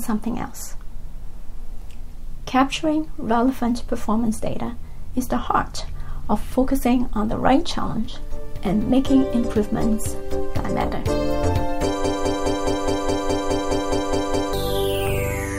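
From 12.04 s to 14.53 s the audio stops moving forward and a short fragment, about 0.21 s long, plays over and over, back to back, twelve times in a row, giving a stuttering, mechanical chatter. This is a broken-record loop. The likely cause is that the player, encoder or stream stalled and kept resending the last piece it held. Whatever should have played during those two and a half seconds is missing.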